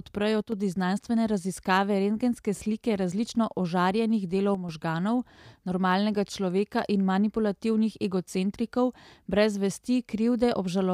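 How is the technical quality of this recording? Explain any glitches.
The recording has two brief level dips, both consistent with one channel drops out. From 0.42 to 0.52 s and again from 4.55 to 4.69 s, the speech abruptly falls by about 6 dB and then snaps back. The likely cause is one stereo channel going silent for those moments, so the mono sum keeps only half the shared signal. A full dropout would go silent; here the sound stays present, just suddenly quieter.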